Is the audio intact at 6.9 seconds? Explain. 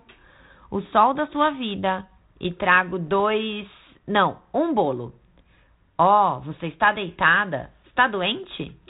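No. Bit errors on the ADPCM link strike from 6.84 to 6.88 s. The flipped bits knock the decoder's step size and predictor off track, so a sharp pop rings into a rough burst. The waveform shows spiky, jagged peaks, and the spectrogram shows a brief broadband smear.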